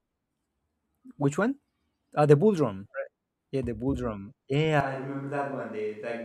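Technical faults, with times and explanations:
4.8 s to the end: switch to a distant microphone. The speech turns roomy, hollow and about 5 dB quieter, likely because the close microphone dropped out. The waveform steps down sharply, and the spectrogram loses bass while noise about 35 dB below the speech fills the pauses.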